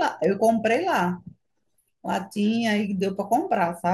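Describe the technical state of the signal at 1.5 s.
At 1.5 s the speech carries word clock ticks, running from 0.24 to 3.76 s: an unlocked receiving clock, off by roughly 70 ppm, drops or repeats one sample about every 0.3 s. Each slip is a sharp tick, seen as a one-sample waveform step and a thin broadband vertical line on a spectrogram.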